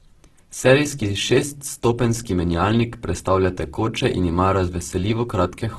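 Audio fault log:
throughout: Opus compression. The speech sounds grainy and rough, with a noisy, coarse texture over vowels and consonants, and nothing at all above 12.1 kHz. The damage is heavy and fits a low rate of around 12 kbps. The likely cause is Opus in its music mode, which keeps each band's energy but, short of bits, fills bands with folded copies of lower ones or with noise, so detail turns gritty rather than swirling.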